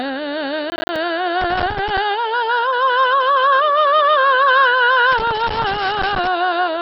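It's a music clip, and the whole thing is dull and gurgly. Nothing comes through above about 5.6 kHz, and what's left has that granular, watery grit where the upper bands keep flickering in and out. That's most likely MP2 compression squeezed hard. With too few bits, Layer II just switches whole high sub-bands off and quantises the rest coarsely, and the heaviness of the damage points to a very low rate somewhere around 32 kbps. From 0.70 to 0.96 s there's a quick burst of tearing crackle, which is processor overload crackle. The machine kept missing its deadlines for the small audio buffers, something like ten of them at roughly 10 ms each, and each miss dropped out as a tiny hard-edged hole of silence. Strung together, those holes make the gritty rip you hear, and it stops once the load clears. Then there are two stretches of rough, irregular scratching, from 1.41 to 1.98 s and again from 5.12 to 6.27 s. 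That's loose connector crackle, a worn or dirty contact rapidly making and breaking as it shifts. The signal gets chopped at random, so you get uneven scratchy bursts rather than the steadier tearing of the overload, and the second stretch runs noticeably longer than the first.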